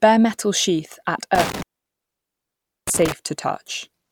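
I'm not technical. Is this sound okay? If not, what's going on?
No. From 1.35 to 3.12 s, right after "metal sheath at," an intermittent contact cuts the speech for about 1.25 s, with crackle at the edges, unlike a clean digital dropout.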